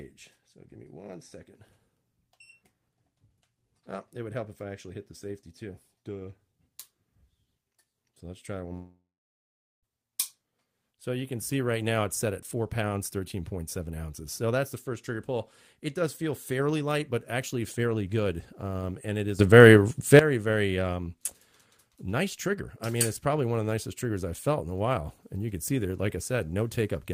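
At 8.73 s the audio breaks off in what is most likely a long network dropout, lasting until 9.85 s. The last sound is smeared forward as a buzzy, fading continuation while the receiver conceals the gap. It then decays into about 0.81 s of silence or low steady noise. When audio resumes at 9.85 s, it picks up further along, and roughly 1.1 s of the original material is simply gone rather than delayed.

At 19.39 s the level rises abruptly by about 13 dB, with the sound and its background noise stepping up together. That is the signature of a sudden gain jump, likely a digital gain change applied between one sample and the next with no ramp. The raised level holds until 20.19 s, so the passage in between sits noticeably louder than its surroundings, noise floor included.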